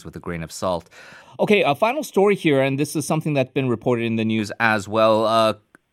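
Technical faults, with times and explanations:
1.22–4.38 s: channel delay (comb filtering). The speech turns hollow and phasey, with fixed notches starting near 1.5 kHz and repeating at even spacing up the spectrum, because one channel runs roughly a third of a millisecond late and the mono sum cancels those frequencies.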